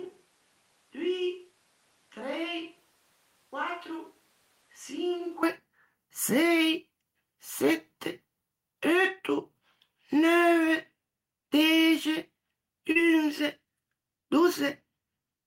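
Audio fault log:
0.00–5.43 s, switch to a distant microphone: the speech opens already sounding roomy and hollow, with thinner bass, a level roughly 10 dB below what follows, and room noise sitting only about 30 dB under the speech. The likely cause is that the close microphone's signal was missing and a far-off pickup carried the audio until the abrupt return near 5.4 s. The simultaneous jump in tone, level, and noise floor distinguishes it from added reverb or a simple gain change.
12.91–12.97 s, short concealed packet loss: about 40 ms of audio never arrived, and the receiver covered 38 ms of it by extending the preceding sound, following its pitch where voiced or as shaped noise where not, before blending back into the real signal. This produces a brief smear or wobble rather than silence or a sharp click, which distinguishes it from a plain dropout or an edit splice.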